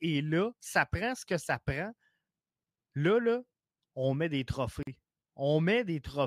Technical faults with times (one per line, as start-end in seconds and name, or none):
4.83-4.87 gap at a join of encoded pieces